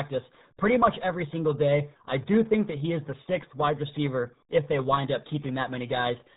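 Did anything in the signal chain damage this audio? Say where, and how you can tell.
Yes, at the codec stage. The speech is heavily muffled and gargly throughout, which points to the RealAudio 14.4 codec, with a bit budget that fits about 8 kbit/s. A spectrogram shows a hard ceiling near 3.9 kHz, with nothing above it.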